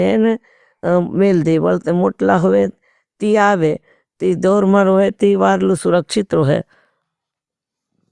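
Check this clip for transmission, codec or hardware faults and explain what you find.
No transmission, codec or hardware fault can be heard in the speech; the signal stays continuous throughout, with no break, distortion or added disturbance.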